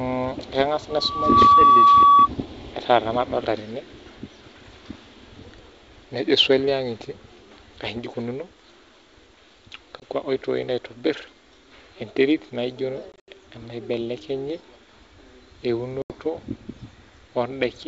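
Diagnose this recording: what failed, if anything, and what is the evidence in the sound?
Loudspeaker feedback squeal, 0.90 to 2.29 s, acoustic loop between microphone and loudspeaker: a pure 1.1 kHz tone swells over about half a second to roughly 15 dB above the speech. At that frequency the loop gain exceeded one, so the tone fed itself until the loop broke.

Packet loss on an ADPCM call, network stage: hard-edged gaps of 20 ms at 10.00 s, 120 ms scattered across 13.12 to 13.31 s (longest run 80 ms), and 80 ms at 16.02 to 16.15 s. These fit anywhere from a single lost packet to several. With packets missing, the decoder's predictor and step size drift from the sender's, so the sound after each hole is briefly mistracked until it resynchronises.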